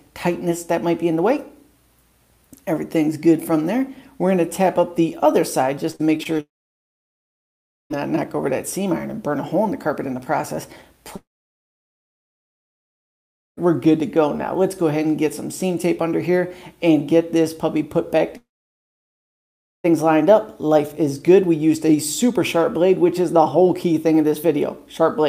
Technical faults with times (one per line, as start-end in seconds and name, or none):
5.91-6.40 repeated packet loss (robotic sound)
6.40-7.92 long network dropout
11.16-13.59 long network dropout
18.37-19.86 long network dropout